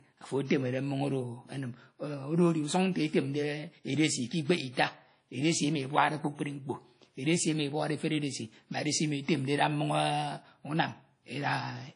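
The speech sounds ringing and washy from start to finish, with a hiss that swells and fades along with the signal and nothing above about 10.1 kHz. This is likely WMA compression, with long-block quantisation noise smearing over tens of milliseconds, which fits a low bitrate near 32 kbps.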